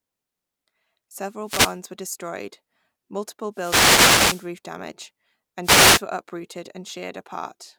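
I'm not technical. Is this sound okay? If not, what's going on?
No. Wireless microphone noise hits at 1.42–1.79 s, 3.52–4.5 s and 5.62–6.03 s: the radio link fades briefly, so static swishes over the speech, unlike steady background hiss.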